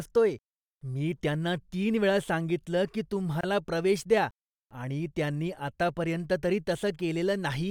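At 3.41 to 3.43 s the speech was encoded as separate pieces and joined untrimmed, leaving a gap at a join of encoded pieces: encoder start delay and last-frame padding form a 25.5 ms gap after "तीन वेळा सांगितलं की", with smeared edges before "प्रवेश द्या आणि त्यांनी" resumes.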